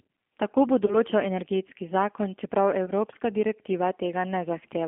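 Throughout, the G.729 codec's 8 kbit/s synthesis gives rough, slightly synthetic speech; the spectrogram shows energy confined to about 250 Hz–3.4 kHz. At 0.86–0.98 s, just before "energetski zakon čeprav", and at 2.86–2.91 s, just after it, VoIP packet loss concealed by the speech codec extrapolates a buzzy tone or coloured noise that fades, which fits about 20 ms lost. It appears as smeared harmonics and a sagging waveform envelope.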